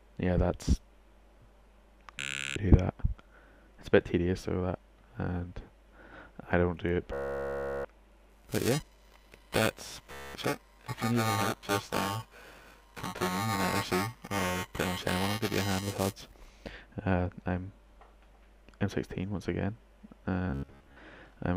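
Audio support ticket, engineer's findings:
Bluetooth stutter at 2.20–2.56, 7.14–7.85, 10.12–10.34 and 20.50–20.97 s (last one scattered). Receiver replays short buffered slices as a buzz rather than silence, and playback resumes later, skipping the missing audio.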